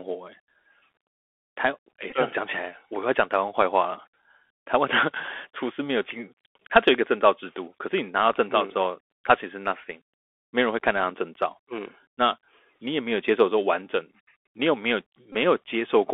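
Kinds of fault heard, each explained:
Bluetooth CVSD headset codec: one-bit delta coding at 64 kbit/s with adaptive steps; the spectrogram stops near 3.5 kHz over a grainy hiss floor, sibilants scratchy.
Bluetooth headset packet repeated: lost packets are refilled with the previous packet's bits, so the waveform shows copied 3.75 ms cycles and a brief buzz near 267 Hz.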